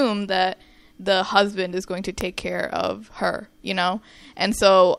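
At 2.21 s, between "husband is going to" and "care of her you", a single sharp snap, peaking at around -10 dBFS, sits on top of the speech, likely an electrical switching spike from a nearby arc. Unlike a dropout click, the speech underneath carries on uninterrupted.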